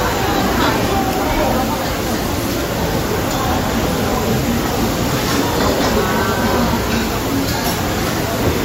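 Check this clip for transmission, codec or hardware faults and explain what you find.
Nothing to report: no transmission, codec or hardware fault is audible anywhere in the sound.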